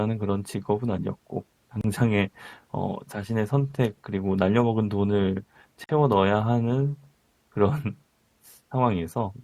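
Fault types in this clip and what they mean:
Gap at a join of encoded pieces: the speech was encoded as separate pieces and joined every 4 s without trimming, so each encoder run's start-up delay and padded final frame stay in as silence. Two dropouts open in continuous speech, 30 ms at 1.81 s and 49 ms at 5.84 s. Each has edges smeared by the codec, and the speech resumes exactly where it stopped.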